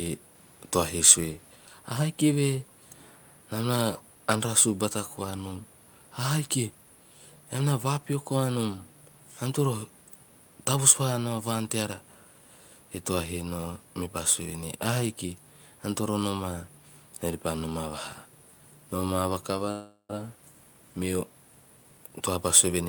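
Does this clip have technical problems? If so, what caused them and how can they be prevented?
Yes, this speech clip has two faults.

From 19.71 to 20.11 s there is a call audio freeze. Packets were likely held up in transit, so the jitter buffer ran dry and the receiver filled the wait by stretching the last sound into a fading buzz or hiss. About 378 ms were filled this way, the final 90 ms falling to silence. When the packets arrived, playback resumed where it had stopped, so nothing was lost but the delay grew by 378 ms. A more stable network path, with wired links and priority for call traffic, prevents this.

From 21.77 to 22.86 s comes a jitter buffer speed-up. After the freeze the buffer held more audio than its target, so the receiver trimmed short pitch-period pieces over and over, removing about a fifth of a second in total. The sound plays at roughly 118% speed without any change in pitch, so the voice sounds hurried. 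Fewer delay spikes on the network and gentler catch-up settings in the receiver prevent it.

The room noise under the sound, about 34 dB below the speech, belongs to the recording and is not a system fault.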